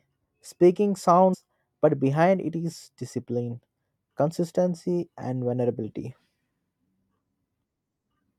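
At 1.33 to 1.35 s the speech jumps abruptly forward, with a brief blip at the join, and resumes at "but behind it is". The continuity breaks there, as though a stretch of the programme has dropped out. This is likely a stream segment skipped: one piece of the segmented stream failed to arrive or decode, and the player moved straight on to the next segment rather than stalling, leaving a hard splice.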